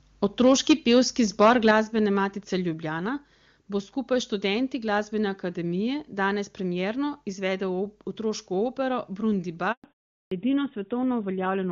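It's a speech clip, and the trouble starts right away with microphone overload: from 0.4 to 0.99 s and again from 1.27 to 1.71 s the peaks are pushed about 7 dB and about 6 dB past the converter's limit. A couple of percent of samples get flattened in the first stretch and around 4 percent in the second, so the loudest syllables pick up that harsh, crackly edge. The likely culprit is an input gain set too hot for the converter. You can also hear the microphone volume stepped down three times, as sudden level drops of about 2 dB at 0.72 s, about 5 dB at 1.71 s right as the second distorted burst ends, and about 2 dB at 2.73 s. Voice and background sink together, which is what you'd likely get from the call software reacting to the clipping and trimming the device input in steps. At 9.72 s there's a handover gap: the sound dies out for 120 ms until 9.84 s while the link switches networks, and whatever fell in that window is gone. 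Straight after that comes a fallback to narrowband. The wideband HD Voice sound up to that point, which fits AMR-WB at 23.85 kbit/s, gives way to something duller and rougher with nothing above 4 kHz through to the end, pointing to AMR-NB at 12.2 kbit/s. Then at 10.27 s there's a clipped start after a pause: after 0.42 s of silence, the first 44 ms of the next sound is swallowed, so it pops in abruptly without its onset.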